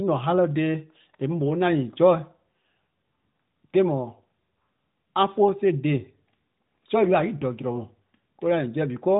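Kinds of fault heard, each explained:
No fault heard; the speech path is intact throughout.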